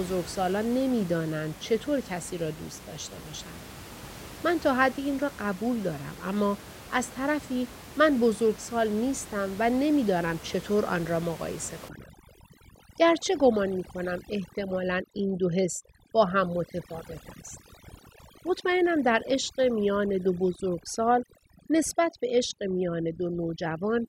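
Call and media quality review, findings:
Overdone noise removal, 11.89 s to end. Background drops and breaks up into twinkling specks. The suppressor is set too strong, cutting individual bands near its noise estimate and taking quiet speech detail with them. Room noise sits about 17 dB under speech.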